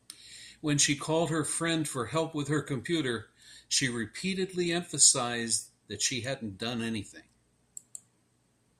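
No technical faults can be heard anywhere in this recording.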